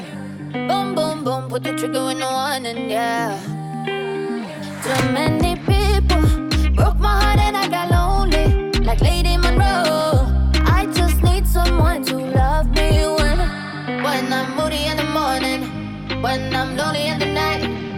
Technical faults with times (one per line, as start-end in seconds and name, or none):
none